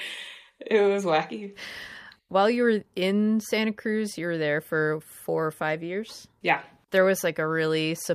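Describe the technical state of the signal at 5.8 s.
At 5.8 s the speech signal is intact, with no audible fault at that moment.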